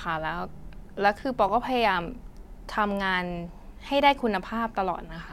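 At 1.49 s in the speech, a repeated buffer sounds as a brief buzzy click. A chunk of about 2.9 ms, which fits a 128-sample buffer, plays three times in a row when new audio arrives late. Unlike a dropout, nothing goes silent and essentially nothing is lost.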